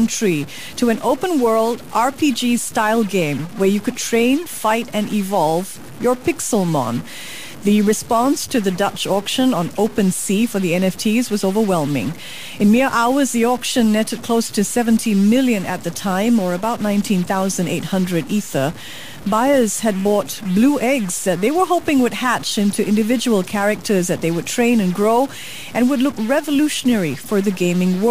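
Speech runs through the whole clip with a harsh, buzzy distortion that never lets up. The fault is a stuck bit. One bit of each sample seems pinned at a fixed value, so about half the samples are thrown off by the same amount. That step is large, around -30 dBFS. The error follows the waveform, so it grits up every syllable. Pauses fill with steady noise too. The likely cause is a broken data line or converter.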